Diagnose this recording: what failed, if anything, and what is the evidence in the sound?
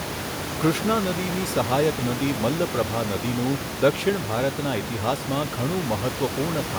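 Nothing stood out on listening to this speech recording as a failure at any stage, and the steady room noise sitting about 8 dB below the speech belongs to the recording space rather than to the system.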